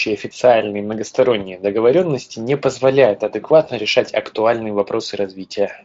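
At 1.39 to 1.43 s, one 20 ms packet of speech is lost, and the decoder fills the gap by extrapolating its last pitch and filter at falling gain. This VoIP packet loss concealed by the speech codec is heard as a short stretched, fading smear as the speech briefly weakens and then recovers.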